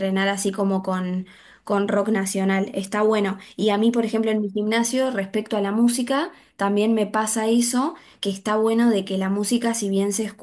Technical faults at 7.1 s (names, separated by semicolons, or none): none